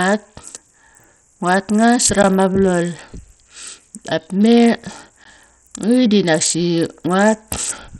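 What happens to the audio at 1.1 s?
At 1.1 s you're hearing the same damage that runs through the whole clip, which is most likely Bluetooth SBC compression. The speech sounds gritty and coarse, with a hashy noise riding on it and the top end dulled, since nothing comes through above 13.4 kHz. SBC splits the signal into a few wide bands and doles out bits crudely, so the weak treble bands get starved. That heavy grit fits a low bitrate of around 64 kbps.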